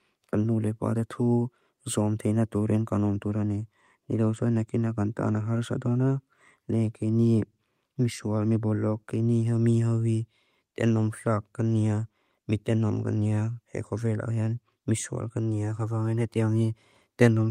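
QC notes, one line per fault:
Nothing stood out on listening to this speech clip.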